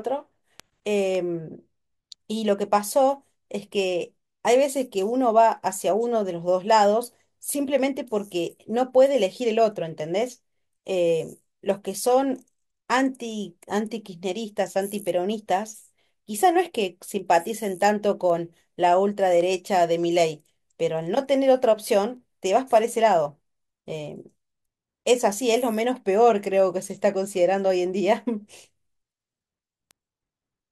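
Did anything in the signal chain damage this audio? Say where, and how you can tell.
Yes. Word clock ticks from the digital interface: sharp clicks of uneven strength recur about every half second from 0.60 s to 30.46 s. The receiver free-runs against the sender's clock, roughly 40 ppm apart, so each slip drops or repeats one sample.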